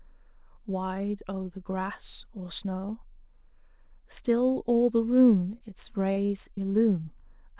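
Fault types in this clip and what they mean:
short stall from a late packet: At about 5.58 to 5.63 s a packet arrived late, so the jitter buffer emptied and the last sound was stretched about 26 ms with nothing lost. A spectrogram shows a brief horizontally smeared patch; the waveform repeats near-identical cycles.
repeated packet loss (robotic sound): From 6.13 to 6.59 s, four gaps recur (longest 36 ms), with about 85 ms patched and 60 ms missing, giving choppy speech. Spectrograms show blocky repeated frames and dropouts below the call path's 4 kHz ceiling; waveforms show looped cycles.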